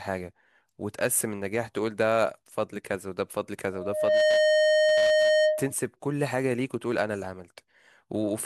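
At 3.72 s a loudspeaker feedback squeal begins in the speech: the microphone is hearing the loudspeaker it drives, and at 615 Hz the loop gain tops one, so that frequency keeps feeding itself. It swells over about half a second to roughly 10 dB above the speech and holds until 5.74 s. Unlike a steady interfering tone or hum, it grows out of nothing rather than sitting at a constant level.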